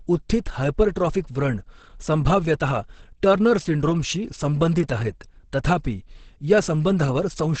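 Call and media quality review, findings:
Speech muffled and hoarse throughout, 0 to 7.6 s; nothing above about 8.6 kHz, a flat ceiling on the spectrogram with empty space above. Likely Opus compression in its speech (SILK) mode at a low bitrate, near 12 kbps. Heavy codec damage: the wideband encoder drops the top band and coarsely models the rest, leaving a muffled, hoarse texture.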